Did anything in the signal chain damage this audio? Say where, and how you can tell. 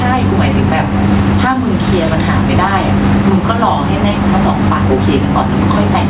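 Yes. Gain pumping runs through the whole clip, with the background swelling in the pauses and ducking, by around 10 dB, under each loud stretch of speech. This likely comes from input gain set far too high, with a fast limiter or compressor in the capture stage repeatedly clamping it down.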